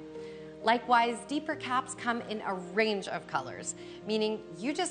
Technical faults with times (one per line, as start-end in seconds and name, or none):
none